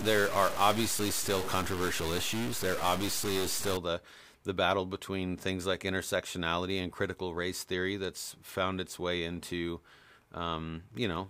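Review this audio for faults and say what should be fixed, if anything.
From 0 to 3.77 s the speech has a harsh, buzzy grit, and the pauses fill with steady noise instead of falling silent. This is likely a stuck bit: one data bit is held fixed, so about half the samples are pushed off by a step of around -30 dBFS. Clipping would only distort the loud peaks, but this grit persists at low levels and through the gaps. To prevent it, test the converter and data lines with a bit-pattern check before recording.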